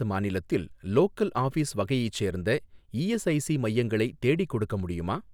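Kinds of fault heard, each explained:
No faults were heard in this speech recording.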